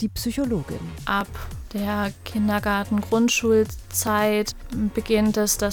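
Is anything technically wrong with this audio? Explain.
Yes. From 1.21 s to 5.5 s, about four clicks recur every 1.43 s. These are clock drift buffer slips: two clocks likely disagree by roughly 700 ppm, so the buffer periodically drops or repeats a few dozen samples, producing each brief pop.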